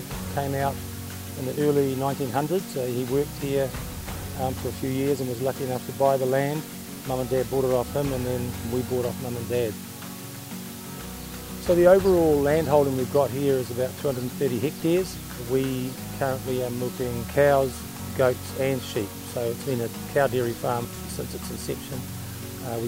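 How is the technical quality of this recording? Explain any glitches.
The recording has one fault, and it lasts the whole clip. It is low bit depth with dither. The audio is stored with very few levels, which fits about 6 bits. Random dither was added before each sample was rounded. That turns the rounding error into steady white noise instead of distortion. You hear a constant, even hiss from start to finish. It sits only about 15 dB below the signal.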